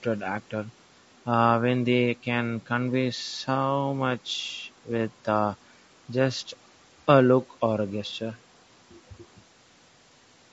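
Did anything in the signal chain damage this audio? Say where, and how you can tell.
Yes, at the codec stage, throughout the speech: the sound points to a likely low-delay AAC compression pass, AAC-ELD at a rate that fits about 32 kbps. Its short frames resolve pitch harmonics poorly, so voices turn rough and grainy, with noise filling between harmonics.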